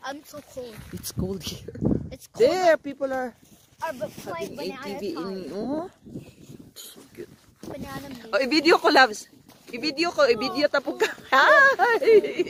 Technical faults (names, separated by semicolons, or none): none